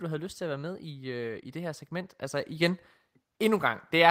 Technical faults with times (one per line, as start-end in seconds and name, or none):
0.05-0.85 automatic gain falling
1.52-4.10 automatic gain rising